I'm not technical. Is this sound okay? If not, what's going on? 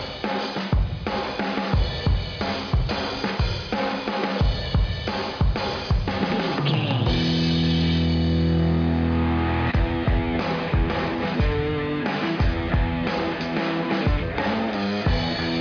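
Yes, no technical faults are audible anywhere in this recording.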